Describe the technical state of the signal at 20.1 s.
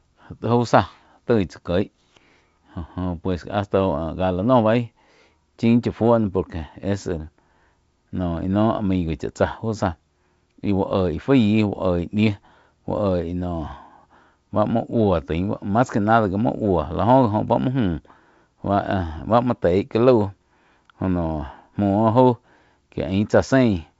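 At 20.1 s the speech is intact, carried by G.722 wideband telephone coding with its usual light upper-band hiss and nothing above about 7.7 kHz.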